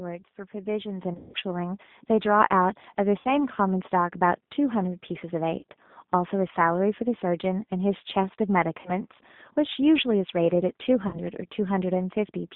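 The speech runs through a G.729 codec for the whole clip, whose sound fits its 8 kbit/s rate. Each 10 ms frame is rebuilt from a vocal tract filter, a pitch predictor and a few pulses, so the voice is plainly rough and synthetic, confined to roughly 150 Hz to 3.7 kHz.

At 1.02 s the microphone volume is stepped up. The call software raised the input gain in a single jump of about 7 dB, so voice and background noise together become suddenly louder.

Moments later, from 1.14 to 1.36 s, comes VoIP packet loss concealed by the speech codec. About 160 ms went missing across 200 ms, the longest gap 120 ms. The decoder stretched its last pitch and filter into a fading tone or coloured noise, and the voice stays weak briefly afterwards.

Shorter concealed losses follow at 3.19 to 3.33 s (60 ms lost), 5.59 to 5.63 s (40 ms), 8.81 to 8.91 s (40 ms) and 11.07 to 11.20 s (60 ms). Each gives a brief smeared dip before the voice recovers.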